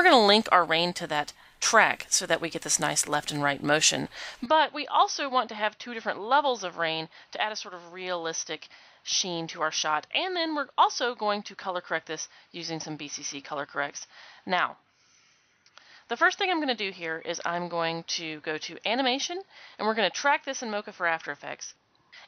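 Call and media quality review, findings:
Input switched to a poorer device at 4.46 s, to end: sound abruptly dulls, nothing above 6.1 kHz, about 5 dB quieter, faint new noise floor, no gap at switch. Likely capture path changed to a narrower-band microphone or headset profile.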